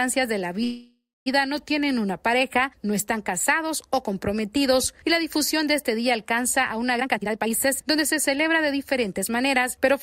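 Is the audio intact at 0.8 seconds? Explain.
No, a call audio freeze runs from 0.63 to 1.28 s, most likely from packets stalling in transit so the jitter buffer ran dry. The last sound is stretched into a fading buzz, going silent for about 240 ms, then resumes where it stopped, now about 626 ms late.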